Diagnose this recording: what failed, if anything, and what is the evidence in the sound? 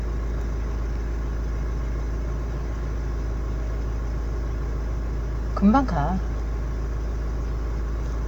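No fault is audible here.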